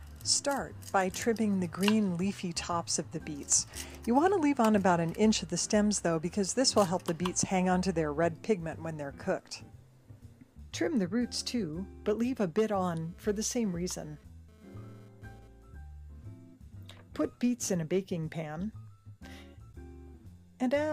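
A nearby 2G phone bursting data at 217 Hz gets rectified by the audio circuit, giving a GSM phone buzz from 12.79 to 15.48 s: raspy, harmonic-rich, intermittent, about 30 dB below the signal.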